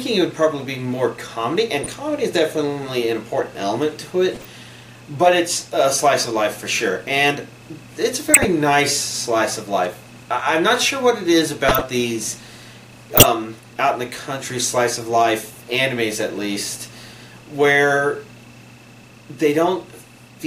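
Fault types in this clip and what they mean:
Corrupt frame decoded: five brief chirps and noise bursts cut through the sound at 1.84, 4.34, 8.26, 11.69 and 13.16 s. Each lasts 50 to 190 ms, and the last three are much louder than the first two. Damaged compressed frames were decoded anyway, scattering energy across wrong frequencies.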